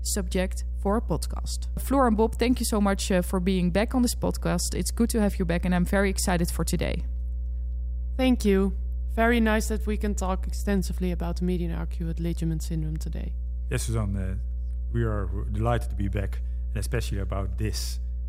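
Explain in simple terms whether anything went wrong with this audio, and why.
A steady, low buzzing drone runs under the speech from start to finish, and it is loud, almost as strong as the talking itself. That drone is mains hum. The electricity supply alternates 60 times a second, and when recording gear picks it up, usually through a ground loop between connected devices or from a nearby transformer, that 60 Hz rhythm leaks into the recording as a constant low tone with a few low overtones.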